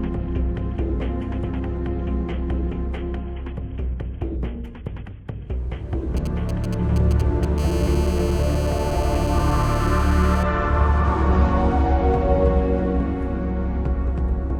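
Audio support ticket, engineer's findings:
GSM signalling bursts, 6.17 to 7.59 s. Galloping dit-dit-dit ticks with short raspy buzzes, roughly 15 dB below the programme. Nearby 2G handset doing signalling only, sending brief groups of radio bursts. Audio circuit rectifies the RF envelope. Each group comes through as a burst at the 217 Hz frame rate.

GSM phone buzz, 7.59 to 10.43 s. Continuous hard buzz at 217 Hz, dense with harmonics, about 17 dB below the programme and unrelated to it. Nearby 2G handset in a call and transmitting every frame. Audio front end demodulates the steady pulse train into a constant tone. The tone starts right after the signalling bursts end. Shield or filter the input, or move the phone.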